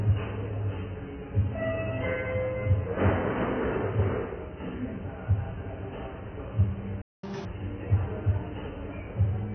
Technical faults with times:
0.00-9.55 AAC compression
7.02-7.23 playback stall
7.23-7.45 catch-up at higher speed

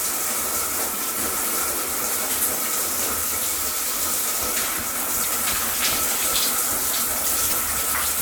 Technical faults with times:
0.54 bit error spike
0.95-0.99 damaged data in a compressed stream
1.45 bit error spike
3.57 bit error spike
4.43 bit error spike
5.21-5.26 damaged data in a compressed stream
7.49-7.53 damaged data in a compressed stream

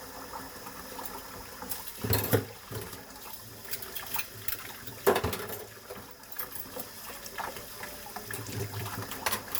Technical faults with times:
none

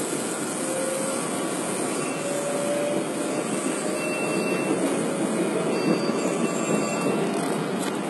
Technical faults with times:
0.00-8.10 HE-AAC compression

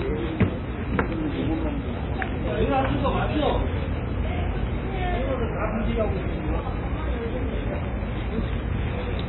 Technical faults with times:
0.00-9.28 MP3 compression

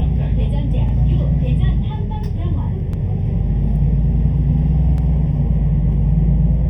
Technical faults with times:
0.00-6.69 channel delay (comb filtering)
0.89-0.93 overlapping chunks
2.93-2.98 overlapping chunks
4.98-5.03 overlapping chunks

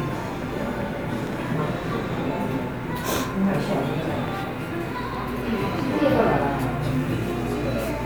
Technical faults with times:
none

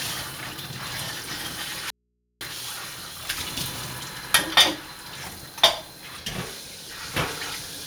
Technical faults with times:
1.90-2.41 audio dropout to a faint residue

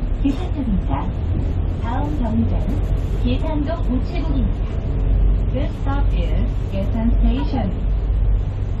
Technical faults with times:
none

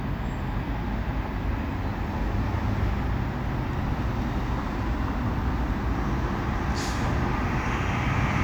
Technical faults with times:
none

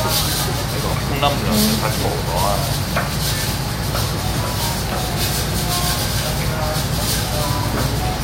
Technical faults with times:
none

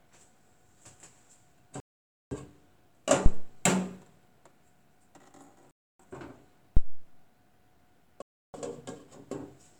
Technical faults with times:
1.80-2.34 Bluetooth stall
3.26-3.54 phantom power thump
5.71-6.00 Bluetooth stall
6.77-7.11 phantom power thump
8.22-8.55 Bluetooth stall

